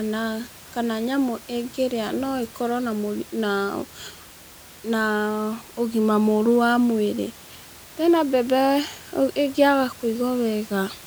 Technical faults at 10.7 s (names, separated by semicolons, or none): none